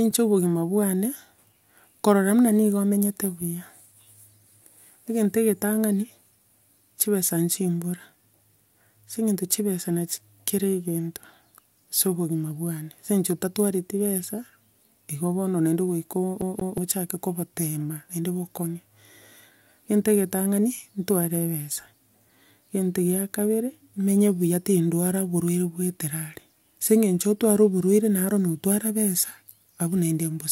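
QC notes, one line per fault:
16.41 to 16.78 s, CD stuck on one turn: the speech catches on a slice of about 181 ms and plays it twice in quick succession, with a tiny mute at the jump. That even, mechanical stutter is the laser being knocked back a track by a scratch on the disc.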